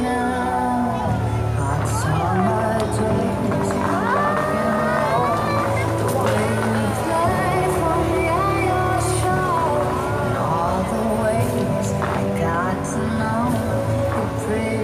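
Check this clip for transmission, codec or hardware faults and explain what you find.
No faults turn up anywhere in the clip.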